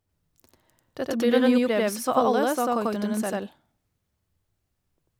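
Throughout, the speech repeats at equal loudness 93 ms later as a slap-echo doubling: channel delay (doubling), one channel lagging by what fits a 4096-sample buffer before mono summing.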